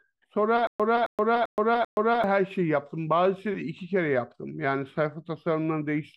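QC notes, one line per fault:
0.67–2.24 s, stutter with silent gaps: a 267 ms speech fragment repeats four times, each followed by about 124 ms of digital silence, a steady 392 ms cycle. This is likely a stalled stream replaying its last chunk at each retry, losing the intended speech.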